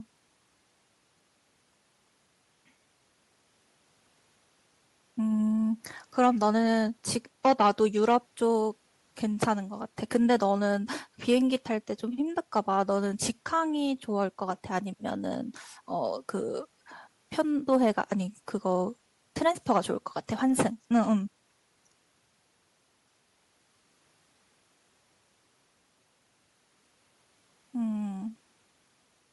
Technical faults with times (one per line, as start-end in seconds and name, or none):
0.00-29.32 Bluetooth LC3 compression